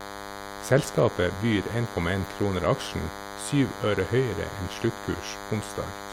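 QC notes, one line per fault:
Throughout: DECT cordless phone buzz, a thin, steady 100 Hz buzz with lots of harmonics sitting about 10 dB under the speech. A nearby DECT handset or base fires a radio burst every 10 ms, and the audio circuitry rectifies it into this tone.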